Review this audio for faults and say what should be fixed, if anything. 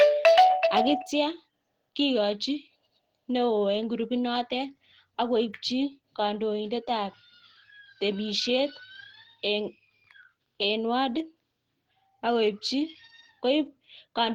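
Between 0.25 and 0.38 s the loudest syllables turn harsh and crackly, the sound of microphone overload. The signal is about 4 dB hotter than the converter can represent, most likely because the input gain is set too high, so the peak tops are sheared off. Only a tiny fraction of samples is affected. On a waveform those peaks show as flat plateaus. A spectrogram shows broadband vertical streaks where the clipping adds new harmonics. Lowering the microphone's input gain until peaks sit several dB below full scale would prevent it.

At 1.02 s the whole signal, speech and background alike, drops abruptly by about 4 dB and stays at the lower level. This is the microphone volume stepped down, likely caused by the call software reacting to the distorted peak just before and cutting the device's input volume in one move. On a waveform the envelope shows a clean step to a smaller amplitude. On a spectrogram every frequency band darkens at the same instant, leaving a sharp vertical boundary. 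Setting a sensible input level beforehand, or disabling automatic gain adjustment, would prevent it.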